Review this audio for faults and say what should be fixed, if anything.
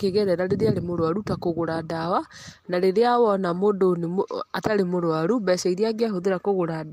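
No faults; nothing needs fixing.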